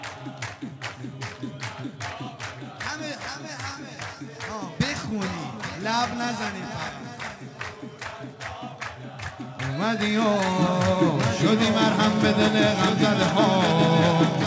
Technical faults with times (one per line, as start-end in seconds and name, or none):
10.21-14.47 doubled audio track